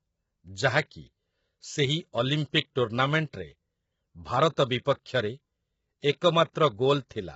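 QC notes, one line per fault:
throughout, low-delay AAC compression: rough, grainy speech, noise between the harmonics, nothing above 7.7 kHz; likely AAC-ELD's short frames starved at about 16 kbps.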